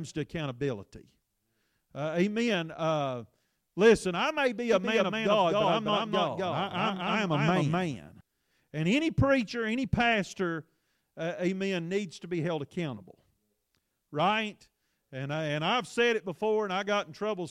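From 4.73 s to 8.21 s, right after "listen I may be", a doubled audio track appears: a second, full-band copy of the speech runs about 0.3 s behind and at roughly the same level as the original. This is likely a second capture by a slower path. Unlike an echo or room reverb, the copy has no decay or room colour, and it cuts in and out abruptly.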